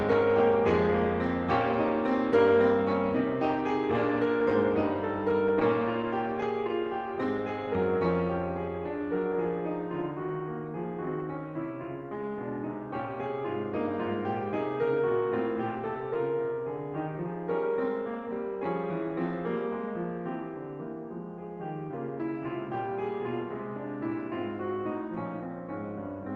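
The music has no technical faults to report.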